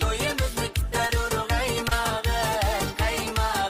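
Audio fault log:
1.07–1.11 s and 1.89–1.93 s, short concealed packet loss: about 20 ms of audio arrived too late each time. The decoder extended the preceding sound, then blended back, leaving a brief smear or wobble.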